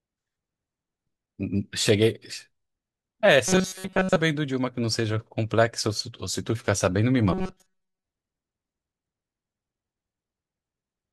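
From 3.48 to 4.17 s and again from 7.33 to 8.03 s, the speech turns into a rigid metallic buzz near 188 Hz. This is robotic sound from repeated short buffers. Most of each stretch is likely a roughly 5.3 ms slice replayed while the real audio is skipped.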